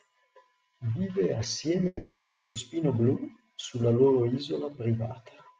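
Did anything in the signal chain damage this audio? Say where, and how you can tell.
Yes, at the network stage. From 1.87 to 2.58 s the speech gives way to a buzzy tail of the last sound that fades out, leaving a brief silence before speech resumes with a chunk missing. That's likely a long network dropout, with the receiver concealing the lost audio.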